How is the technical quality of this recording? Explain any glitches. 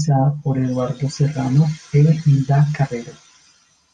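The recording's signal is technically intact, with no glitches, dropouts or processing faults to explain.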